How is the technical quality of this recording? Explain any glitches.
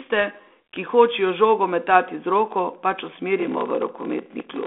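The recording has one clear fault. It is narrowband telephone speech with light G.726 coding, and the final second or so breaks up.

From 3.38 s to the end, a block size mismatch pads each block with zeros, causing a 43.1 Hz buzz and slowing the speech to 0.861 speed. This fits a 1024-sample read block.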